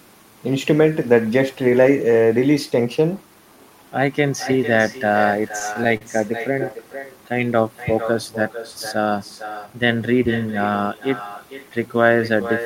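Echo with no canceller runs throughout: the far end's loudspeaker feeds its microphone, so every phrase returns about half a second later, roughly 10 dB quieter and thinner. Repeated stalls (stutter) from 5.48 to 6.02 s: late packets emptied the jitter buffer five times, each gap bridged by stretching the last sound, longest 37 ms, so the speech briefly drags and hitches.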